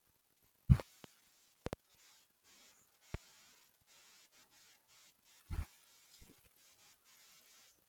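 A brief voltage spike, likely from a plug, switch, static discharge or driver glitch, entered the signal path three times, and the following circuitry shaped each spike into a loud pop over the speech, which continues beneath it. Two pops in quick succession land between 0.80 and 1.07 s and again between 1.66 and 1.75 s, each about 20 dB above the speech. A single, softer pop, about 15 dB above, follows at 3.14 to 3.17 s.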